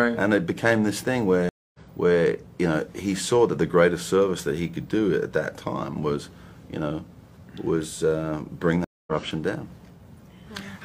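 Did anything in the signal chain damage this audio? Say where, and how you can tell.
Yes. The damage is at the network stage: there are two stream reconnects. At 1.49 to 1.80 s the audio drops to silence for about 250 ms and resumes roughly 0.3 s further on. At 8.84 to 9.11 s there is about 230 ms of silence, and it resumes roughly 0.2 s ahead. The jump forward shows the connection broke and the player rejoined a live stream with a fresh decoder, skipping the material sent during the outage.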